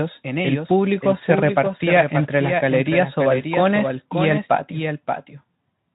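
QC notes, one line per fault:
Throughout: doubled audio track. A second, full-band copy of the speech runs about half a second behind the original and only a few decibels quieter, so every phrase is shadowed by a clear, dry repeat. It has no decay or room colour like a real echo would, which points to the audio being mixed in twice, likely through a slower second capture path or two out-of-step copies in an edit. The speech also carries light Speex coding.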